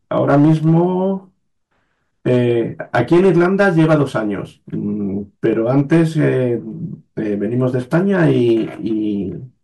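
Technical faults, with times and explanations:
0.18–0.84 s, 2.28–2.52 s, 2.95–4.03 s, 5.46–6.29 s and 7.95–8.52 s, hard clipping: the speech peaks overran a stage by about 5, 3, 8, 5 and 3 dB, so their tops were sheared flat. The corners of those flats spray harmonics high up the spectrum, giving a gritty crackle that becomes a harsh fuzz in the worst stretch, 2.95–4.03 s. Unlike soft saturation or a limiter, the level is not rounded or turned down. The peaks break up abruptly.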